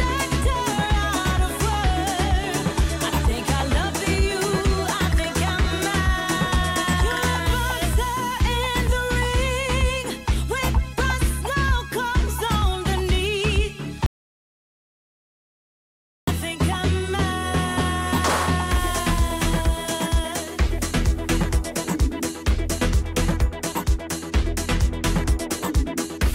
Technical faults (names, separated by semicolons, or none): audio dropout to silence